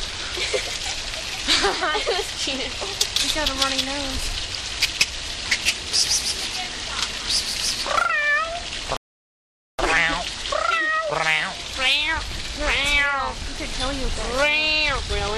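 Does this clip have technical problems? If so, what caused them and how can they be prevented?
Yes, there's a rebuffering stall from 8.97 to 9.79 s: the player ran dry of downloaded audio, went silent for about 0.82 s, then picked up exactly where it left off, so nothing's missing, just time added. Buffering more ahead before playback starts would prevent it.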